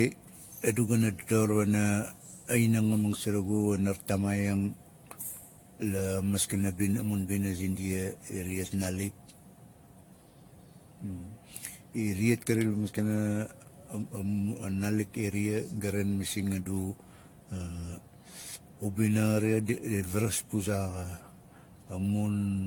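Throughout the speech there is generation loss: the sound is swirly and hollow, consonant attacks are softened and smeared, and nothing reaches above 19.2 kHz. The likely cause is the audio being decoded and re-encoded with AAC-LC around seven times, at settings consistent with 96 kbit/s, each pass quantising on a shifted frame grid so the errors stack. A single encode at that rate would sound far cleaner; the cumulative hollowness and blurred transients are what mark repeated passes.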